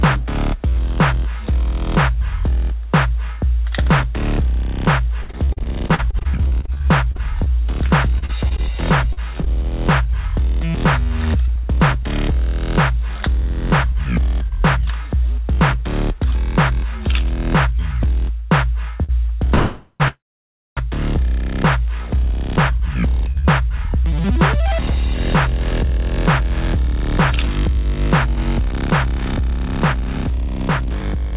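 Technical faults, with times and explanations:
5.22–9.48 s, repeated packet loss (robotic sound): 29 short holes, the longest 66 ms, are patched by extending the preceding sound. About 17% of this stretch is concealment, and 660 ms of the original is lost outright, so the audio turns choppy.
13.27–14.19 s and 22.11–31.33 s, jitter buffer speed-up: the receiver trims pitch-period slices to reduce excess buffered delay. Playback runs at 107% and then 108% with unchanged pitch, removing about 70 ms and then about 0.7 s, so the audio sounds hurried.
19.03 s, short stall from a late packet: the jitter buffer empties briefly and the last sound is held for 54 ms until the packet arrives. Nothing is lost, but one sound lingers slightly too long with a faint buzz or dip.
19.55–20.02 s and 20.08–20.79 s, call audio freeze: the sound hangs as a fading buzz or hiss, then drops to silence, 50 ms in the first freeze and 590 ms in the second. 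Playback then resumes where it stopped, adding 451 ms and 688 ms of delay. The likely cause is packets held up in transit.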